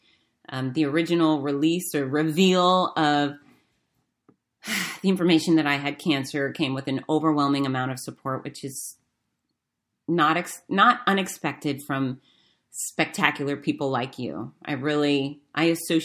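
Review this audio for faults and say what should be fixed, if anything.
Nothing in this speech recording needs fixing. No technical fault can be heard anywhere in it.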